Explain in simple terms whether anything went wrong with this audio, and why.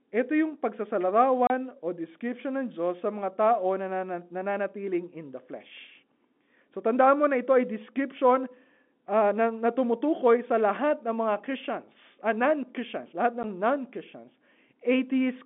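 Packet loss filled with silence cuts the speech twice: a 30 ms hole from 1.47 to 1.50 s and a 10 ms hole at 13.43 s. Chunks of sound went missing in transit, and the phone-line audio plays abrupt silence in their place, with hard edges.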